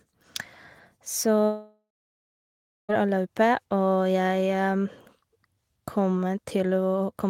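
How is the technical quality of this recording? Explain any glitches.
The recording has one clear glitch, a long network dropout. From 1.45 to 2.91 s, speech fades into a decaying buzz, then about 1.06 s of flat silence, likely from missing packets. The spectrogram shows a blank gap.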